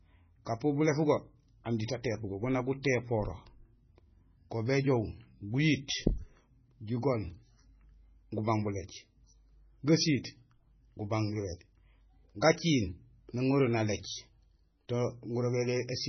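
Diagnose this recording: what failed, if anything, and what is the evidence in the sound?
Throughout the speech the sound is watery and swirly, with a warbling, metallic edge on sibilants and softened consonant attacks. Nothing is present above 6 kHz, a hard ceiling rather than a gradual roll-off. The stage is the codec, likely heavy MP3 compression at a very low bitrate, which fits around 16 kbps. Short of bits, the encoder truncates the treble at a fixed point and zeroes faint frequency lines, which flicker on and off between frames.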